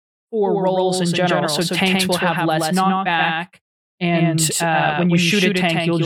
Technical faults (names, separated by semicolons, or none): doubled audio track